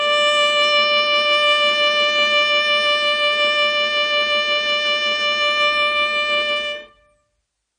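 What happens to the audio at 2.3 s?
At 2.3 s the music carries AAC compression damage, as it does for the whole clip. Nothing is heard above about 9.6 kHz, so the top end sounds dull. The damage is plainly audible. Sustained tones warble and the high detail turns smeared and fizzy. The likely cause is a low-bitrate AAC-LC encode, around 32 kbps. The encoder lowers its cut-off and quantises the spectrum coarsely, leaving gaps that swirl as the music moves.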